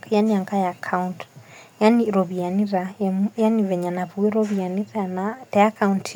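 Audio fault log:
On listening, nothing in the speech stood out as a fault.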